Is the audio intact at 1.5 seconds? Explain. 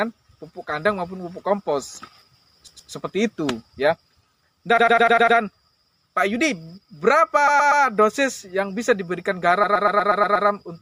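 Yes, the audio is intact at 1.5 seconds, with no dropout, click, distortion or other fault at that moment.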